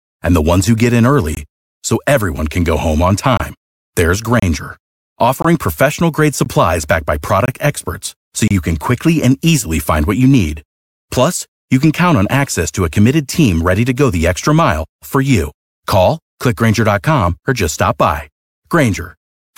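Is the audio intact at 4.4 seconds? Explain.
No. At 4.40 to 4.42 s there is a gap between stream segments: the timestamps of two consecutive 1.0 s segments fail to meet, and the player fills the missing 27 ms with silence. The speech briefly drops out with hard edges, though none of it is lost.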